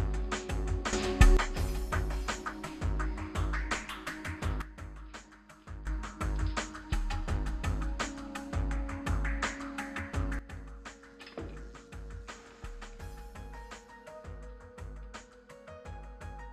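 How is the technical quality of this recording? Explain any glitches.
The recording has level glitches. Three sudden gain jumps occur. From 0.93 to 1.37 s the level rises about 12 dB. From 4.62 to 5.87 s, and from 10.39 s to the end, it drops about 12 dB. Sound and background noise shift together. A digital gain change applied without a ramp is the likely cause.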